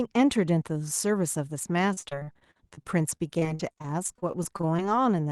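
Repeated packet loss (robotic sound) runs from 1.93 s to 4.80 s. Over that stretch, incoming audio kept going missing, and each hole was bridged by extending the sound just before it. The next dropout followed shortly after. There are more than two dozen brief holes, the longest about 47 ms. Roughly a fifth of the span is synthetic fill, so the speech turns choppy, with fragments lost.

The jitter buffer slow-down runs from 4.65 s to 5.02 s, overlapping the tail of the loss. Its reserve had run low or its target delay had just been raised, so the receiver stretched the signal by repeating short pitch cycles, adding about 37 ms. Playback there slows to 92 % speed while the pitch stays put. Sounds are audibly drawn out, heard through the Opus call path's narrowed high end.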